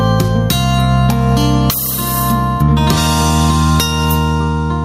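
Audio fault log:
Throughout: gain pumping. The level ducks under each loud sound, swinging by around 10 dB, so loud and soft passages sit unnaturally close together and the whole clip sounds squashed. This is likely an input gain set far too high feeding a fast limiter or compressor. Unlike a noise gate, the level never cuts to silence; it breathes continuously with the program.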